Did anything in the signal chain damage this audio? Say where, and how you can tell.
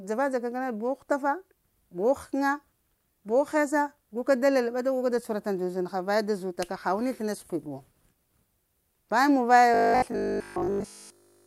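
Yes. From 9.74 s to the end, speech becomes a metallic 50 Hz buzz: robotic sound from repeated short buffers, likely driver-buffer underruns looping 20 ms chunks.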